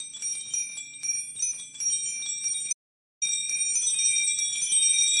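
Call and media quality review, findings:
Audio dropout to silence, 2.73–3.22 s: sound cuts to silence, no room tone, about 0.49 s lost. Likely input loss while the encoder kept writing silence.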